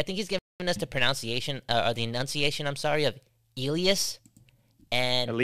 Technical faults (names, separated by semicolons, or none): Bluetooth stall